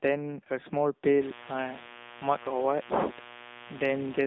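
Right from the start the speech has that narrowband mobile sound of the AMR narrowband codec. The line band runs only from about 200 Hz to 3.7 kHz, so there's no air or sibilance up top and not much body below. The vocal-tract model is clearly being squeezed, which fits a low mode around 7.4 kbps. The damage is plainly audible: the voice comes out buzzy and a bit synthetic, like a cheap phone call.

From 1.16 s to the very end, a mains buzz joins in. It's 60 Hz based, with switching spikes twice per cycle that spray harmonics up through the passband. That's why it comes across as a steady, raspy buzz rather than a clean low hum. It sits roughly 15 dB under the speech.

Then there's a short patch of AMR bit errors from 2.42 to 2.51 s. That 90 ms stretch fits about three 20 ms frames. The less protected bits got flipped at a rate of a few percent, but the important bits still passed their check, so the decoder took the frames as good. 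The pulse positions and the finer gain and spectral values came out wrong. Pitch and level roughly hold, but the voice briefly turns hoarse, scratchy and gargly.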